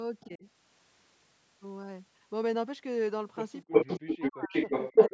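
From 0.2 to 0.26 s a faint echo leak appears, a copy delayed 259 ms at about 30 dB below the speech, likely from a loudspeaker echo canceller letting residue through. It shows as a weak, ghostly smear of repeated harmonics on the spectrogram.

From 0.26 to 0.45 s the speech is suppressed in double talk, dipping roughly 15 dB as the canceller likely mistakes the talker for echo. The waveform envelope sags briefly.

From 3.65 to 4.71 s suppression returns far harder, carving gaps up to about 40 dB deep across roughly 0.7 s. The waveform shows near-silent holes and the spectrogram shows blank vertical bands.

From 3.72 s to the end a strong echo leak arrives 340 ms late and about 10 dB louder than the speech, likely an echo canceller failing outright. On the spectrogram it appears as a dominant shifted duplicate of the harmonic pattern.

From 4.91 s to the end the speech is pushed down again by about 20 dB, giving a thinned, notched envelope beneath the echo. 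Throughout, the spectrogram shows nothing above 8 kHz.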